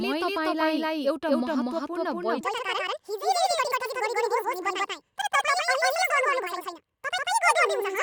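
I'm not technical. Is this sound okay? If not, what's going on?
No. Three problems can be heard.

A doubled audio track runs through the whole clip. Every bit of speech is followed by a second, equally loud copy about a fifth of a second later, so it sounds like two people saying the same thing slightly out of step. The copy is an exact repeat with no room echo to it. The likely cause is the same recording being captured twice, once through a slower path, or an edit that left two copies overlapping.

From 2.41 s to the end, there is a section at the wrong speed. The speech suddenly becomes rushed and squeaky, playing 1.71 times faster than normal and rising to nearly an octave higher. Speed and pitch jump together at that moment. This is likely because that part was played back or edited against the wrong clock, so it runs too fast.

At about 3.86 to 3.90 s there is a corrupt frame decoded: a brief chirp or blip that lasts under a twentieth of a second. 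It comes from a small piece of the compressed audio that was damaged, which points to a couple of bad frames. The player played that piece anyway, so the sound in that instant came out at the wrong pitches.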